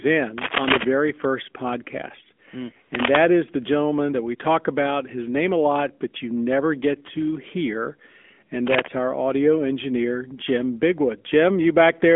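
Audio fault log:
throughout – AMR narrowband mobile codec: the speech sits in a telephone band of 200 Hz to 3.4 kHz with nothing above 3.6 kHz, and carries a plainly audible buzzy, synthetic edge from pulse-driven vocal-tract modelling, which fits an AMR-NB mode near 10.2 kbps.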